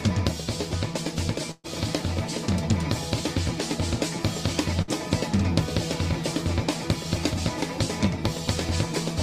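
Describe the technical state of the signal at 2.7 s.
At 2.7 s the music plays through intact, with no dropout, click, distortion or other audible fault at that point.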